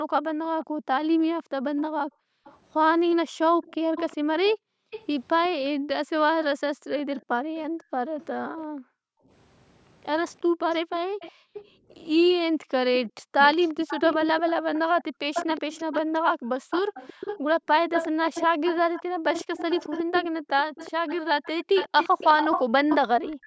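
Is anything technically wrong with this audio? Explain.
Yes, two faults can be heard in this speech.

Background gated by the echo canceller, from 0.03 to 21.75 s and again from 23.37 to 23.46 s. While the loudspeaker plays, the canceller clamps the microphone hard, so room sound drops by up to about 40 dB, for around seven seconds in total.

Echo leak, from 0.62 to 5.46 s, 7.14 to 8.64 s and 10.94 to 23.36 s. A delayed copy of the speech returns 365 ms late, likely because the echo canceller failed to remove the loudspeaker's sound. It sits about 15, 25 and 10 dB below the speech in those three stretches.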